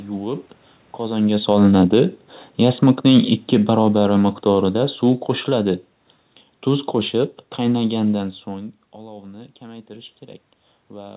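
A speech recording with automatic gain falling: from 1.0 s to 5.86 s the level sinks by about 10 dB as the gain control, having judged the input too loud or its background noise too strong, pulls its gain down. Unlike the talker moving around 1 s, the room noise drops along with the voice.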